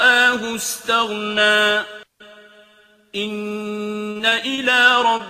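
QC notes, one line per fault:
4.11–4.59 s, repeated packet loss (robotic sound): four gaps, longest 38 ms, each patched by extending prior audio. About a fifth of the stretch is concealed, so it turns choppy.
5.17 s, short concealed packet loss: about 20 ms never arrived in time. The decoder continued the last sound to bridge it, leaving a brief smear or wobble.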